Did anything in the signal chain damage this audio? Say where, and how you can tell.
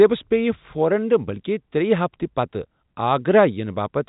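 No, nothing in the chain has hurt this speech, which has simply been carried as G.711 telephone coding, so the sound stops at about 3.8 kHz as a phone line's would.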